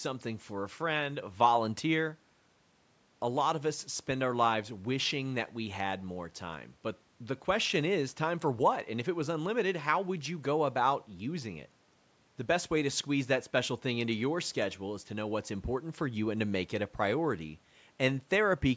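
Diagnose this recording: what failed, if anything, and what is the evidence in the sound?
Nothing failed: the speech passes through a call's microphone processing with its normal high-pass bass roll-off and nothing above 8 kHz, and the room noise sits about 39 dB below the speech as part of the recording rather than any system fault.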